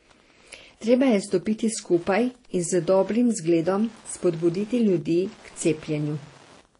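From start to finish, a faint Wi-Fi interference tick runs under the speech, repeating every 102.4 ms, about ten times a second, at about 30 dB below the signal. Its rigid beacon timing sets it apart from the denser 217 Hz buzz of GSM interference.

Also throughout, nothing is heard above 10.5 kHz, and two kinds of codec artefact sit together: swirling, smeared detail and a watery, metallic edge. This points to transcoding between lossy codecs, likely MP3 followed by Vorbis, both at low bitrates, rather than a single codec.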